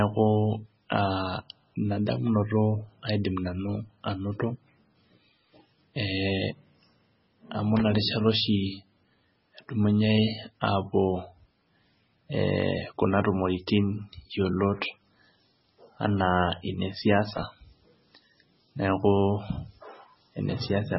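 Speech with heavy codec damage throughout: nothing above 5.6 kHz, watery, swirling detail and smeared attacks, likely from MP3 compression at a low bitrate, sounding close to 16 kbps. Loose connector crackle appears as brief irregular scratchy bursts at 7.77–7.81 s and 17.37–17.43 s, where an intermittent contact chops the signal.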